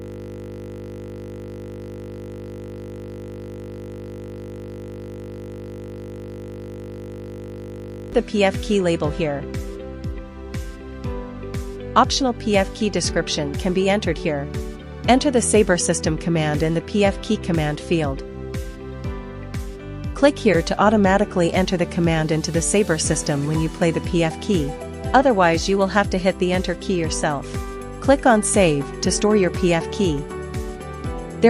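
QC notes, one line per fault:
0.00–8.13 s, system hang loop: a steady 50 Hz buzz that is already running when the clip opens and continues until 8.13 s, when normal sound resumes. The machine or its audio driver froze, and the sound hardware kept replaying the same 20 ms stretch of its ring buffer about 400 times. At that length the repeats merge into a tone at the loop rate rather than an audible stutter.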